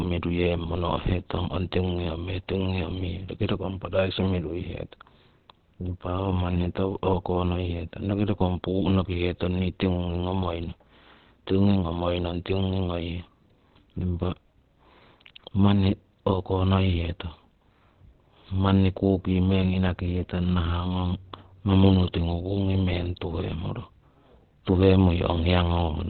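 Opus compression is the likely cause of the damage heard throughout: the speech has nothing above 4.3 kHz and sounds muffled and hoarse, which points to the codec's narrowband SILK speech mode at a bitrate around 12 kbps, squeezing detail heavily.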